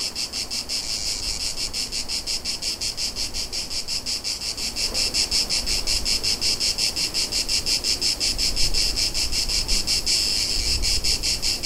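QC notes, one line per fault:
No faults found. Nothing in the audio calls for a note.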